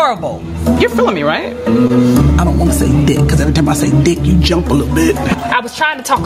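Gain pumping runs through the whole clip: the level keeps surging and dropping by something like 20 dB. The likely cause is a microphone input set far too hot, with a fast limiter clamping down on every peak and squashing loud and soft parts together.

Short concealed packet loss occurs at 1.87 to 1.91 s: about 20 ms of audio never reached the decoder in time, and the receiver filled it by extending the preceding sound before blending back, leaving a brief smear or wobble there.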